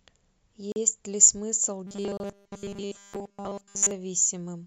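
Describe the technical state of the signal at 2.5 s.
At 2.5 s the signal is inside a stretch of robotic sound from repeated short buffers, running from 1.87 to 3.91 s. Throughout that span it is likely made of the same roughly 5 ms chunk replayed, forcing a rigid 200 Hz metallic buzz. A spectrogram shows flat, evenly spaced harmonics at 200 Hz multiples, and the waveform shows identical 5 ms cycles.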